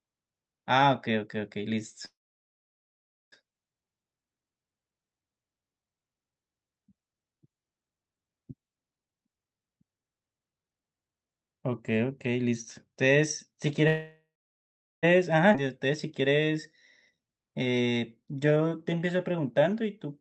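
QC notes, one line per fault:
2.05–3.34 s and 13.87–15.05 s, call audio freeze: the sound stalls, trails off as a fading buzz or hiss, then goes silent for about 1.2 s and 0.76 s. It resumes where it stopped with nothing lost, likely because delayed packets emptied the jitter buffer.
15.53–15.69 s, skip ahead: playback jumps forward almost seamlessly, with roughly 0.7 s of speech dropped. A stretch of audio was dropped while later audio was already waiting.
16.23–16.53 s and 17.15–20.07 s, jitter buffer slow-down: the speech drags at the same pitch, running at 87% and then 89% speed, with stretched sounds. The buffer repeated pitch periods to rebuild its reserve.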